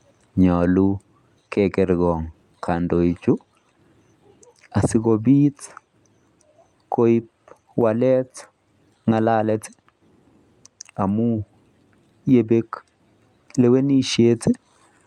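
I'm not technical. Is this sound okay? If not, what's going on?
Yes, nothing wrong can be heard in this recording.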